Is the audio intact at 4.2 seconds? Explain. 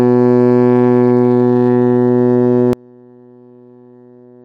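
No. From 2.73 s to the end, the music drops by about 30 dB, leaving a faint residue. This is likely one channel inverted, cancelling the shared centre when summed to mono.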